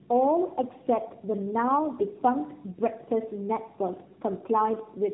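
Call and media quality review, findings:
Tandem speech coding, throughout: rough, muffled, warbly speech, nothing above 3.8 kHz. Probable component: transcoding gateways. Three speech coders in series, sounding like AMR-NB at each end with an ADPCM-type link between, each re-encoding the previous stage's damaged output.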